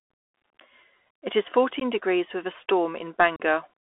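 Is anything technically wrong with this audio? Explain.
Yes. The speech sounds thin, boxed-in and grainy throughout, with scratchy s sounds and a hiss underneath. Nothing passes outside roughly 300 Hz to 3.4 kHz. This is the Bluetooth CVSD headset codec, whose one-bit up/down steps, fitting a 64 kbps link, cannot track sharp changes.

Twice the speech drops out abruptly, leaving a hard-edged gap, then returns briefly quieter. The first gap runs from 1.80 to 1.83 s and loses 15 ms. The second, from 3.36 to 3.41 s, loses 37.5 ms. This is unconcealed Bluetooth headset packet loss: a couple of packets, then several, went missing and were replaced with silence or an idle pattern.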